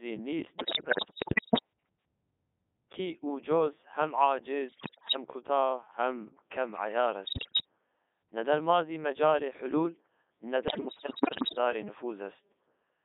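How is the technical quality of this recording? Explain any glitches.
Technical quality is poor. The speech has passed through a very low-rate digital voice link, and it breaks up in four places.

The first fault runs through the whole clip. It is the Codec 2 vocoder, at a rate that sounds like its top 3.2 kbit/s mode. The system never transmits the waveform. It sends only pitch, voicing, energy and a coarse spectral outline, and the decoder rebuilds the voice from sine waves inside a 250 Hz to 3.6 kHz band. The codec damage is heavy. Every syllable comes out buzzy, robotic and thin, with no real vocal texture.

The second fault is bit errors on digital voice radio, at 0.58 to 1.60 s, 4.68 to 5.16 s, 7.26 to 7.66 s and 10.68 to 11.58 s. In these stretches the link corrupts roughly one bit in ten, and nearer one in seven in the third burst. Because each bit of such a compact frame controls its pitch, level, voicing or spectral shape, the errors reshape whole frames. 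The synthetic voice lurches in pitch and loudness, changes tone colour abruptly, and breaks into bleeps, warbles and garbled robotic sounds.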